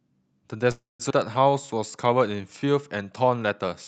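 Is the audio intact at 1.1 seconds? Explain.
No, there's a skip ahead right there, from 1.10 to 1.12 s. Playback jumps forward and about a fifth of a second of sound is simply gone, joined almost seamlessly to what follows with only a tiny bridge of a few milliseconds. That pattern points to a stretch of packets being thrown away, in transit or by the jitter buffer shedding a backlog, because later audio was already queued up and waiting.

That backlog comes from a call audio freeze just before it, from 0.71 to 1.02 s. The sound stretches into a fading buzz and drops to silence for about 160 ms. Nothing is lost there, but the playback falls about 280 ms behind. The likely cause is delayed packets leaving the jitter buffer empty. When they finally arrive, the pile-up is what gets trimmed at 1.1 s.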